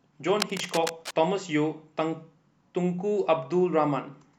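A worn cable, connector or control was likely being moved between 0.40 and 1.12 s, so its contact resistance kept jumping about and injecting uneven bursts of noise into the path. The result is cable scratch noise: for roughly three quarters of a second, a dense, irregular scratching and rustling sits over the speech, at around 10 dB below the speech level, before clearing once the contact settles.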